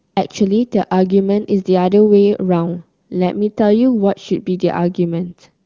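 From 5.26 to 5.54 s, an AMR rate drop occurs: the link apparently forces the wideband codec down from a clear high rate to its lowest, consistent with roughly 23.85 falling to 6.6 kbit/s. The speech keeps its bandwidth without any gap but briefly turns raspy and synthetic.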